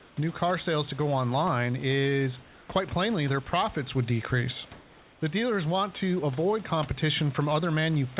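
From 0.00 to 0.17 s, before "new car sales to", and from 2.42 to 2.69 s, between "to go online is" and "quite plainly their", the real room background gives way to comfort noise in place of the background. This is likely the receiver filling gaps in a discontinuous transmission. It sounds like a smooth, featureless hiss, about 2 dB and about 4 dB quieter respectively. On a spectrogram it shows as an even, textureless band below 4 kHz.

At 3.50 s, after "is quite plainly their", 30 ms of sound is dropped by the voice detector, likely because the sender took it for background. Steady noise fills the gap, which shows as a brief flat patch in the waveform before "would decrease".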